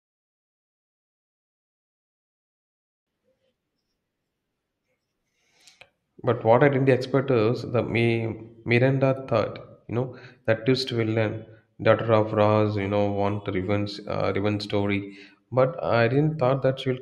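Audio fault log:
0.0–3.07 s, truncation distortion on a fade: The speech fades in over the first three seconds or so, and the quiet early part is rough and gritty nearly the whole way to 2.99 s. The fade was scaled down with too few bits and no dither, which fits an 8-bit path. At low level the waveform is left with only a handful of coarse square steps, so it crumbles rather than swelling in smoothly.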